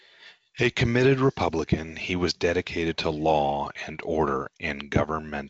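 No technical faults are audible.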